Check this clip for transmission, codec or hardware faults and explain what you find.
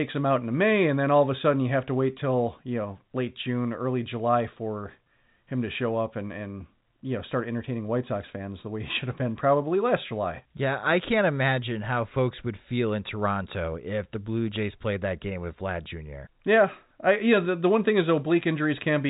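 Nothing faulty can be heard anywhere in this recording.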